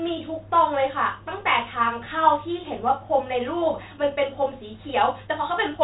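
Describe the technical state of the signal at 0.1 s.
At 0.1 s the speech is intact, carried through G.726 ADPCM at 32 kbit/s with the band ending near 3.8 kHz, and no fault occurs at that moment.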